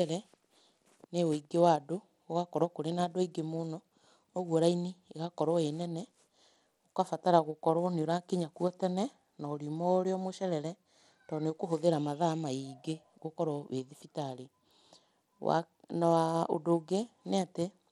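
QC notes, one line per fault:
Throughout: Bluetooth SBC compression. The speech carries a gritty, grainy noise, and its treble flickers in and out, which is plainly audible and points to a low bitrate around 96 kbps. The likely cause is SBC coding, where a small bit budget starves the weaker upper sub-bands and coarsely quantises the rest, leaving aliasing on the sound. On a spectrogram the top bands look patchy, blinking on and off in blocks, with smeared noise filling between harmonics.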